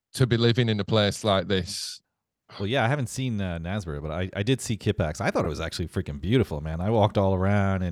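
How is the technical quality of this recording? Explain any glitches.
One glitch stands out, at 5.45 s, between "I thought" and "it was actually freaking". It is a repeated buffer: fresh audio reached the output late, so the device replayed its last block, about 2.9 ms long and consistent with a 128-sample buffer, four extra times. That tiny loop comes through as a brief buzz or click rather than an audible stutter, and essentially none of the speech is lost.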